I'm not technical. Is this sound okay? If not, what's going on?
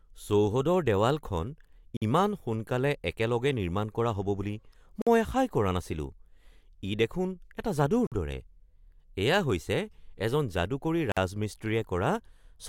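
No. The speech drops out for a split second, about 50 ms, at 1.97 s (just before "ইমান সোনকালে"), 5.02 s (just before "মই আশাই কৰা"), 8.07 s and 11.12 s. This is a gap between chunks: the audio arrives in 3-second pieces, and a short silence sits at each join.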